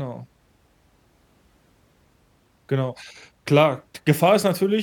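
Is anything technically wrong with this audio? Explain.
No, nothing in this speech recording points to a technical problem; the signal stays intact and consistent throughout.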